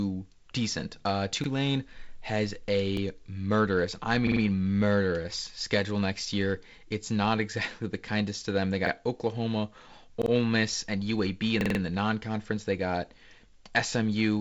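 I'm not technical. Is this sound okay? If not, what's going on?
No. A repeated buffer fault causes brief stutters at 1.44, 2.97, 4.27, 8.87, 10.22 and 11.61 seconds. New speech arrived late, so the player replayed its last 46-millisecond piece, up to four extra times at 11.61.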